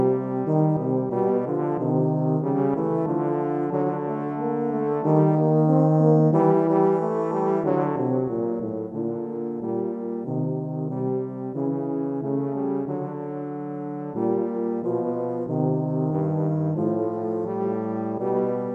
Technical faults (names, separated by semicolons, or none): none